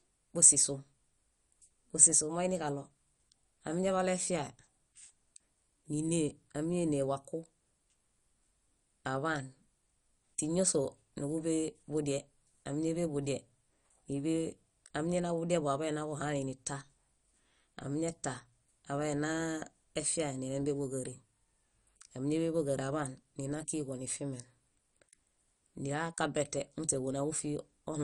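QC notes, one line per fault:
Throughout, MP2 compression: the likely cause is an MPEG Layer II encoder working at a low rate, which points to something near 48 kbps. With so few bits shared among its 32 sub-bands, the encoder switches off the upper bands entirely, so nothing is heard above about 11.3 kHz, and the bands it keeps are coarsely quantised. The speech comes out dull, with a plainly audible gurgling, granular roughness as bands flicker in and out.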